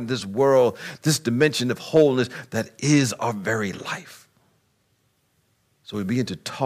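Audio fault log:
1.42–1.46 s and 1.96–2.03 s, hard clipping. The speech briefly exceeds what the signal path can pass, by about 4 dB and then about 2 dB. Peaks are cut flat. Those flat tops add high harmonics, heard as short crackles on the loudest moments.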